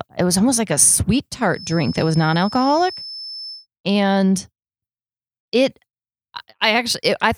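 A speech recording in which a feedback whistle sits behind the talking from 1.48 to 3.67 s: a thin, steady tone near 5.2 kHz, roughly 15 dB below the speech, swelling and fading slowly in level. The likely cause is a loudspeaker-to-microphone loop held just at the edge of feedback. Unlike electrical whine or mains hum, the pitch stays fixed while its level drifts, and unlike runaway howl it never builds into a howl.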